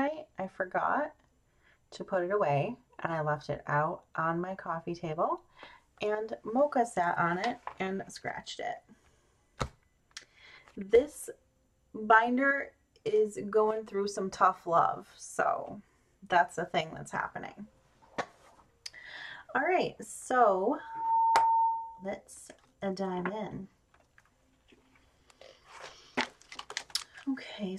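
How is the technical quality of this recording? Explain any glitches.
There's one real glitch here, a loudspeaker feedback squeal from 20.79 to 22.14 s. The mic was catching its own speaker output, and at 909 Hz the loop gain topped one, so that tone fed on itself. It swells in over about a third of a second and sits roughly 5 dB above the rest of the audio until it cuts off.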